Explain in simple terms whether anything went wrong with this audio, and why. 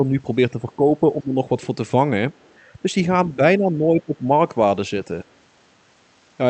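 The talker's speech dips at the very start, around 0.52 to 1.03 s, 1.2 to 1.36 s, 3.36 to 3.41 s and 3.58 to 4.29 s. This is speech suppressed in double talk, likely from an echo canceller turning the talker down while the other side was speaking too.

Around 2.36 to 2.59 s, a second voice comes through very faintly, far below the talker. This is the other side's voice leaking through, likely from the loudspeaker getting back into the microphone because the echo canceller didn't fully remove it.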